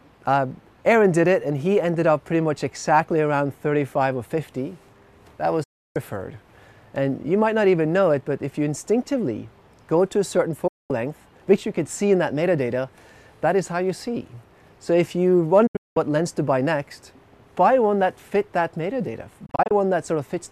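Digital broadcast dropouts mute the sound at 5.63–5.96 s and 10.67–10.91 s, then as scattered short holes at 15.67–15.97 s and 19.46–19.71 s. Each is a fast fade into silence while reception fails, showing as flat-line gaps in the waveform and blank vertical bands across the spectrogram.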